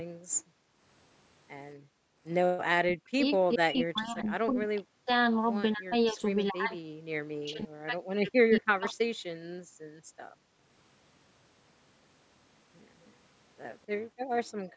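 Right from the start, 0 to 0.82 s and again 1.76 to 2.22 s, the room tone gets clamped down by about 40 dB. That's background gated by the echo canceller: it ducks the mic hard while the far end is playing.

From 2.83 to 5.1 s, 5.74 to 6.92 s and 7.33 to 9.1 s, the speech itself sinks, roughly 40 dB at worst. That's speech suppressed in double talk, likely the canceller losing track when both sides talked at once.

The background gating comes back from 9.38 to 10.63 s, with the same hard dip and return.

At 13.01 s there's a brief echo leak, a faint delayed copy about 255 ms behind and around 35 dB under the speech.

From 13.92 s to the end, the room sound gets gated one last time.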